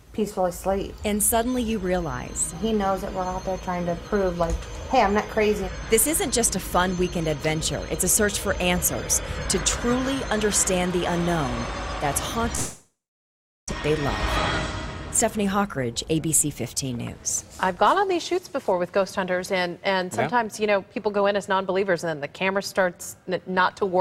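At 12.55 s the sound stops arriving, and for about 1.16 s the receiver papers over the gap: a fading buzz or hiss first, then roughly 0.76 s of near silence. That's likely a long network dropout, and a full second of audio never comes back.

From 15.37 to 17.69 s you get a jitter buffer speed-up. The buffer had backed up, so the receiver snipped out tiny pitch-period chunks, around a tenth of a second in total. The audio runs at 104% with pitch unchanged.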